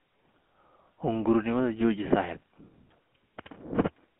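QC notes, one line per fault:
Throughout: GSM full-rate codec. The whole clip carries a buzzy, gravelly roughness, plainly audible, because the speech has been rebuilt from a vocal-tract filter driven by regularly spaced pulses, with only a third of the excitation samples kept. The bandwidth is telephone-narrow, roughly 200 Hz to 3.4 kHz, so the top end is dull and the low end thin, which fits the 13 kbps full-rate coder heard over a phone line.
2.38 to 2.46 s: GSM bit errors. For about 80 ms the speech breaks into a squawky, gargling burst with a pop in level. Corrupted bits reached the decoder and scrambled the filter, pitch and gain values, so the spectrum bends and the loudness jumps for those frames. The length points to around four damaged 20 ms frames, and the density of damage suggests an error rate somewhat under 1 percent on a weak link.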